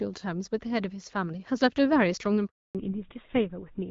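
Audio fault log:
2.47 to 2.75 s, handover gap: the speech fades out within a few tens of milliseconds and leaves 280 ms of silence while the call is passed from one network to the next. No speech frames reach the decoder during the switch, so whatever was said in that stretch is gone. On the waveform the trace drops to a flat line. A spectrogram shows a clean vertical band of nothing across every frequency until the new link starts sending audio.
2.75 to 3.91 s, fallback to narrowband: once the new link starts, the call has left HD Voice, where the sound before the gap came through the AMR wideband codec at 12.65 kbit/s with only light coding damage. It now runs on GSM full rate at 13 kbit/s, and nothing above 4 kHz survives. Sibilants lose their hiss, and the sound turns duller and rougher. The spectrogram shows a hard horizontal ceiling at 4 kHz from the gap onward. Before the gap, energy reached to about 7 kHz.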